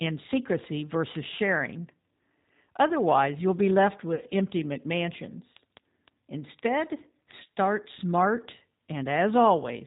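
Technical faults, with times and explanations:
Throughout: G.729 codec at 8 kbit/s. The speech is rebuilt from a vocal tract filter, a pitch predictor and a few pulses per frame, so nothing above 4 kHz survives and the texture is plainly rough and synthetic. Plain low-pass filtering would sound muffled but stay natural.
4.15 to 4.23 s: VoIP packet loss concealed by the speech codec. About 40 ms of audio is missing, which fits two lost packets. Rather than a silent dropout or click, the decoder stretches its last pitch and filter into a buzzy tone or coloured noise that fades, and the sound stays weak briefly afterwards.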